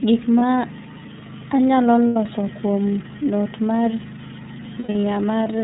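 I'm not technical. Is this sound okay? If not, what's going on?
No. The whole clip runs through the iLBC codec, a phone-style compressor that cuts off the bright top end and leaves the speech a bit rough and synthetic. There are also lost iLBC frames: short dropouts where the decoder fills the gap by repeating a buzzy snippet of the last sound. You'll hear them at 0.39 to 0.42 s, at 2.07 to 2.16 s just before "kuom not mar", and in a scattered patch from 4.79 to 5.04 s whose longest gap is about a tenth of a second.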